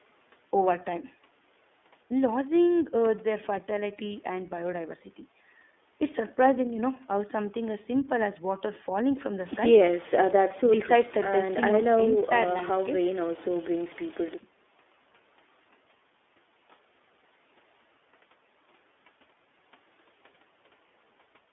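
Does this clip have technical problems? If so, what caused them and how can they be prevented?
Yes. The speech carries iLBC codec damage for its whole length, and it is plainly audible. The audio sits in a narrow telephone band of roughly 250 Hz to 3.5 kHz. The voice has a rough, slightly synthetic edge. iLBC codes each 30 ms frame's excitation independently of the previous frame, so fine waveform detail is lost and the frames don't blend smoothly. The coarseness points to the 30 ms mode at about 13 kbps. To prevent this, record locally or use a wideband codec such as Opus at a generous bitrate instead of a narrowband VoIP path.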